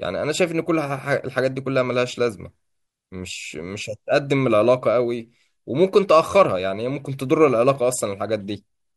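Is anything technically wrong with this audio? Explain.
No, nothing is technically wrong with this speech recording. It holds steady throughout, and no point in it calls for a closer look.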